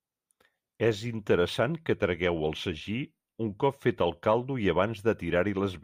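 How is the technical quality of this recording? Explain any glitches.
No glitches or technical faults can be heard anywhere in the recording, and the signal stays intact and continuous throughout.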